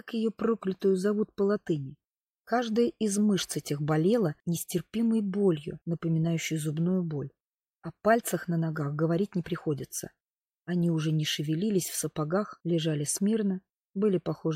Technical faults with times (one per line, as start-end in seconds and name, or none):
none